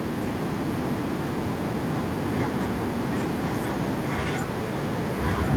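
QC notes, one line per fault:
5.12–5.49 s, echo leak: a delayed copy of the speech returns 1.05 s late, about 10 dB quieter, likely a loudspeaker pickup the far-end echo canceller missed.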